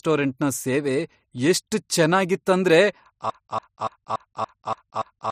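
From 3.30 s, just after "ಸೇವೆ ಎಷ್ಟ್ ಚೇನ್ನಾಗಿತ್ ಅಂದ್ರೆ", the speech falls into a broken-record loop: a 0.29 s fragment repeats identically seven times, back to back, to the end. The likely cause is a stalled player or stream resending its last buffer. Unlike an echo, each repeat is identical and the speech stops moving forward.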